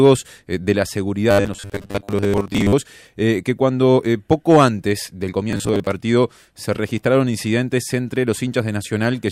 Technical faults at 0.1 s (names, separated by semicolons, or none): none